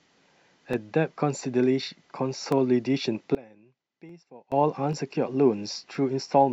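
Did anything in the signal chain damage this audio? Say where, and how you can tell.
Yes. The driver or buffer stage likely dropped samples at 0.73, 2.52, 4.09, 4.93 and 5.95 s. At each point, a fraction of a millisecond of the stream is missing, so the waveform jumps to a later value. Each gap sounds like one sharp click.

One channel is inverted between 3.35 and 4.52 s, likely from reversed wiring in the analogue stage. Because one side has opposite polarity, the centred speech cancels when summed to mono. It falls by about 24 dB, leaving only a faint residue.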